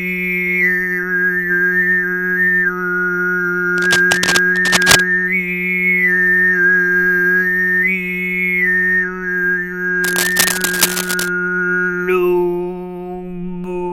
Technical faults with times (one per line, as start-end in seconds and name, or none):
3.73-5.00 cable scratch noise
10.03-11.28 cable scratch noise